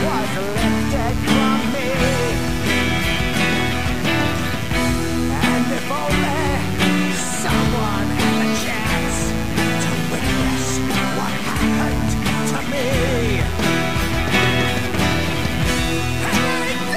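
Mains buzz runs through the whole clip from start to finish, locked to a 60 Hz supply. Something like a dimmer, rectifier or unshielded cable lets sharp switching spikes into the audio path twice per mains cycle, so energy lands on 60 Hz and its harmonics stretching up into the kilohertz range. The result is a steady, raspy buzz sitting roughly 15 dB below the wanted sound, prominent enough to stay audible under it throughout.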